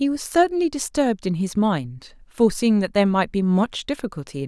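No technical faults can be heard anywhere in the recording. There is no moment in it that needs a time marked or a cause explained.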